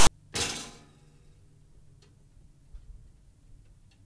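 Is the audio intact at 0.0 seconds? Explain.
No. From 0.0 to 0.09 s there is a hard-edged burst of loud, rasping static pushed off to one side, then a stretch of dead silence. This is file tags played as audio: text metadata and its zero padding were decoded as samples before the real sound begins.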